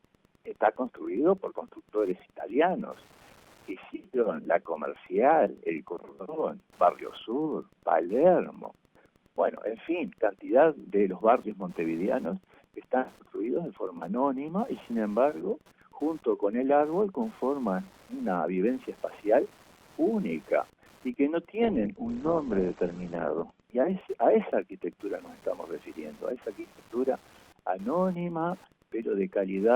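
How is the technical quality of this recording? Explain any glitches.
There are two problems. Wi-Fi interference runs the whole way through: faint ticking every 102.4 ms, nearby radio beacons getting rectified by the audio circuit. From 21.62 to 23.62 s, the adaptive stream drops to a lower bitrate because the connection slowed. The treble cuts off abruptly at 8.2 kHz and artefacts thicken, with no gap in the audio.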